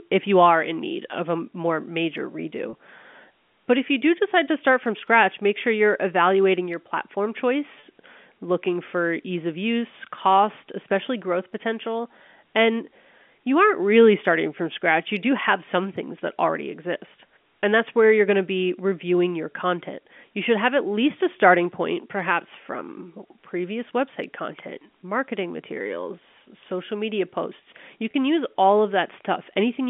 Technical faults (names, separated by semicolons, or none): packet loss with pitch repetition